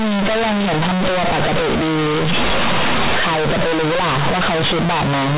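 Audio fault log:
Throughout, companded audio read as linear: the speech was stored as mu-law G.711 bytes but is being played back as plain linear 8-bit samples, with no expansion step. Because mu-law's sign and magnitude bits don't line up with a linear scale, every sign flip jumps across roughly half the output range, so quiet passages blow up to the same size as loud ones. That's why it comes across as a very loud, buzzy mess with heavy noise filling the pauses.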